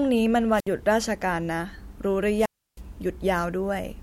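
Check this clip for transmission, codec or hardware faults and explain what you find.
Two wireless microphone squelch dropouts interrupt this speech clip, at 0.52 to 0.69 s and at 2.36 to 2.81 s. Both times the analogue FM radio link weakens until the receiver's squelch gate shuts the output off. Each event opens with a brief surge of hiss or static as the signal fades, then a hole of near silence, about 64 ms in the first event and about 318 ms in the second, before the speech returns.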